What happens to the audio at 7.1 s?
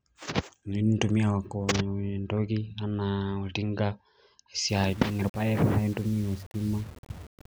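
At 7.1 s the speech is caught in low bit depth without dither, running from 4.69 s to the end. It is likely requantised to about 7 bits by rounding, so the error tracks the signal: quiet passages turn grainy and fizzy, and the softest tails sputter or drop out. A waveform shows visible stair-steps, and a spectrogram shows signal-dependent hash roughly 25 dB below the speech.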